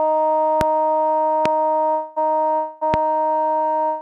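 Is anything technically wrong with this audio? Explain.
Yes, there are two kinds of fault: three loud pops and three call audio freezes.

Loud pops occur at 0.61–0.63 s, 1.46–1.48 s and 2.94–2.96 s. Each is a single sharp crack lasting about 20 ms and peaking roughly 15 dB above the surrounding sound, which carries on beneath it. Each is likely a sudden voltage step or pulse, from a plug, switch, static discharge or driver glitch, entering the signal chain. The downstream circuitry shapes that pulse into the brief, hard transient heard here.

Call audio freezes occur at 1.91–2.18 s, 2.54–2.83 s and from 3.85 s to the end of the clip. In each, the sound stops moving forward and the last fragment is stretched into a buzzy or hissy tail that fades. This lasts about 260 ms, 270 ms and 170 ms respectively, never dropping to full silence. The likely cause is network packets arriving late, so the jitter buffer ran dry and the receiver improvised a continuation. 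When the packets arrive, playback resumes where it halted, so no audio is lost but each freeze pushes everything after it later.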